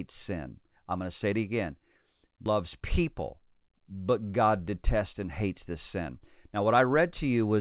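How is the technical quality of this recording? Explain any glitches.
The recording has two timing glitches, a jump and a short hurried stretch. It comes through a call-quality channel with nothing above 4 kHz, which fits a narrowband G.711 mu-law codec.

At 2.46 s the speech jumps abruptly forward with no gap, losing roughly 0.4 s of sound. This is a skip ahead: a run of audio was dropped, in transit or when the jitter buffer overflowed, and playback spliced directly onto the next waiting audio.

From 3.12 to 3.91 s the speech sounds slightly rushed, running at about 107% speed while the pitch stays unchanged. This is a jitter buffer speed-up. The buffer was holding more audio than its target, so the receiver trimmed many short pitch-period pieces, removing around 70 ms in total.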